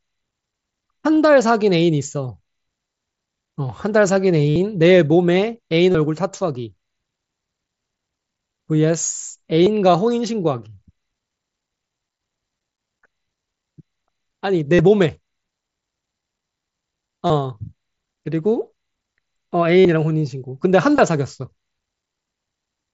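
A brief buzzy, held tone replaces the speech from 4.49 to 4.56 s, then again from 5.92 to 5.95 s, 9.64 to 9.67 s, 14.74 to 14.79 s, 17.26 to 17.30 s, 19.79 to 19.89 s and 20.96 to 20.98 s, each ending in a slight warble as real audio resumes. This is concealed Bluetooth headset packet loss. Voice packets from the headset dropped out, and the receiver filled each gap by repeating the closest-matching recent fragment of waveform. The single loss at 1.15 s, about 7.5 ms, is barely audible. The longest gaps, 67.5 ms at 4.49 s and a scattered cluster near 19.8 s, drone longest.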